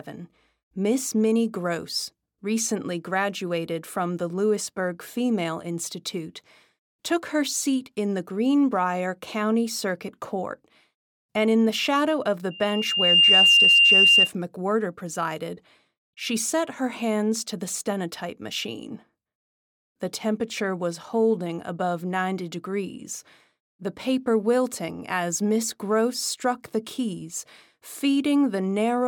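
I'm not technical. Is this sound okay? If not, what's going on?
No, there's one problem. Right after "the shadow of the", at about 12.5 seconds, you get loudspeaker feedback squeal: a microphone picked up the loudspeaker it was feeding, and the sound looped round and round until one high pitch, around 2.8 kHz, took over. It swells in under a second to a piercing whistle that's clearly louder than the speech, and it doesn't stop until about 14.3 seconds.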